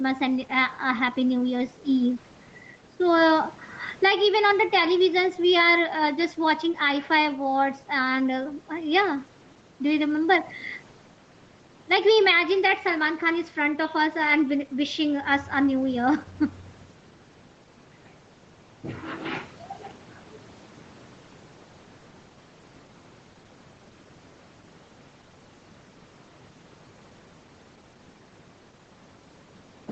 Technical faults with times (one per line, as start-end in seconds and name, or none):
0.00-29.92 gain pumping